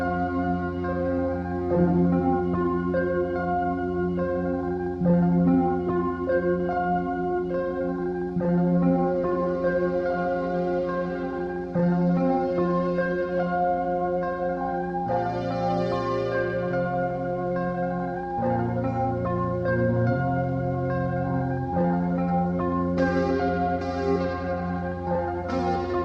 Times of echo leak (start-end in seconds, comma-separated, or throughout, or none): none